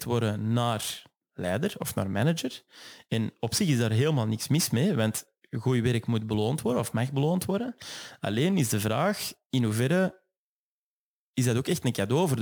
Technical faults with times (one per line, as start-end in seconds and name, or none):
0.00-12.41 crude rate conversion